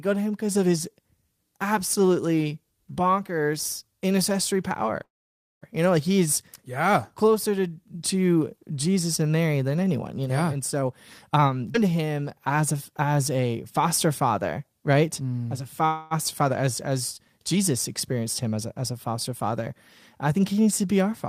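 At 5.03 s, just after "absolutely bonkers intercessory power", there is a call audio freeze lasting about 0.61 s. The sound stops: a brief trailing continuation of the last sound is followed by roughly 550 ms of silence, and then the speech resumes exactly where it left off, with nothing missing. The likely cause is packets held up in transit, so the jitter buffer ran dry and the receiver filled about 581 ms before the late audio arrived. The whole conversation now runs that much later.

From 10.82 to 11.63 s, after "know yeah and", there is a jitter buffer speed-up. Playback runs at about 114% of normal speed with the pitch unchanged, so the speech sounds hurried. The receiver is shortening an over-full buffer by cutting out pitch-period-sized slices one after another, removing roughly 150 ms in total.

At 11.73 to 11.77 s there is a skip ahead. Roughly 150 ms of audio is gone, and the two sides are joined with only about 12 ms of fill, so the speech jumps forward abruptly with almost no gap. 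This points to a stretch being discarded while later audio was already queued, which further reduces the delay.

Right after that, from 11.93 to 12.21 s, just before "as a as a", there is a jitter buffer slow-down. Playback drops to about 88% of normal speed with the pitch held, and the sounds are drawn out. The receiver is repeating single pitch periods to add about 39 ms back into the buffer.

At 15.86 s a second call audio freeze lasts about 0.28 s. This time the gap is filled with a fading continuation of the preceding sound rather than silence, and the speech then carries on without loss. Again, packets were likely late, and the fill adds about 247 ms of delay.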